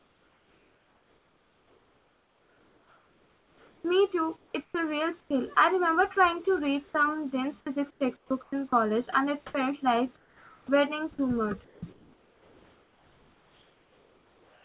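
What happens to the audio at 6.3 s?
Between 6.15 and 6.47 s the speech turns choppy: about 40 ms of sound is dropped and filled with comfort noise. This is likely sound chopped by the voice detector, which switched transmission off and on.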